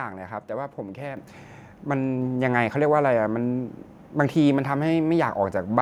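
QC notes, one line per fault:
1.17 s, microphone volume stepped up: the speech and background noise jump louder together, by about 6 dB, as the call software raised the input volume.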